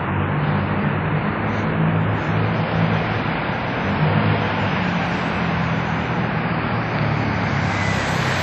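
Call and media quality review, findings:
WMA compression, throughout: ringing, washy smear with signal-dependent hiss, nothing above 13.2 kHz; likely a low-bitrate transform encoder spreading quantisation noise across long blocks, consistent with roughly 48 kbps.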